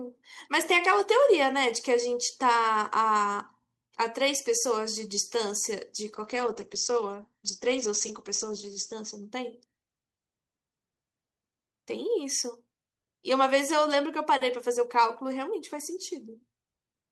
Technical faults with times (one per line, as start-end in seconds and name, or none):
6.15-9.35 call bitrate drop